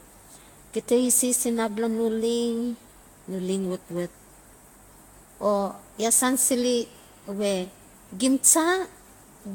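Generation loss runs through the whole speech clip. It sounds swirly, smeared and hollow, and consonant attacks blur. Nothing remains above 18.6 kHz. The likely cause is around five lossy passes, which fits repeated Vorbis encoding near 67 kbit/s.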